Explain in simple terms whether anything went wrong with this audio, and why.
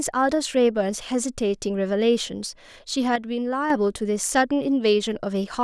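From 3.16 to 3.70 s the speech abruptly drops to about half its level, then recovers. The likely cause is one channel dropping out of a stereo recording.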